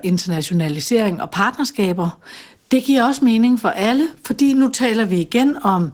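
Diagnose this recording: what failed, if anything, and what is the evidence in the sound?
The codec stage failed here: Opus voice compression is plainly audible across the whole speech clip. The voice sounds slightly hoarse and robotic. In hybrid operation the band below 8 kHz goes through a linear-prediction coder with a coarsely quantised excitation, and a thin transform layer carries the band above it. On a spectrogram the top band looks smeared and patchy in 20 ms blocks, pointing to a rate near 16 kbps.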